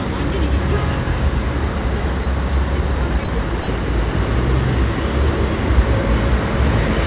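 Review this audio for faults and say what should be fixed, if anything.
The sender's voice detector likely mistook parts of this sound for background and briefly stopped sending, so the receiver filled the gaps with comfort noise. It happens three times, from 2.24 to 2.26 s, 3.24 to 3.28 s and 3.62 to 3.68 s. Each time the sound gives way to a short stretch of steady, featureless noise lasting 20, 40 and 60 ms, with real sound missing underneath. All of it sits within the call path's band, where nothing is heard above 4 kHz. To prevent this sound dropped by the voice detector, disable voice detection and discontinuous transmission for non-speech audio, or make the detector less aggressive.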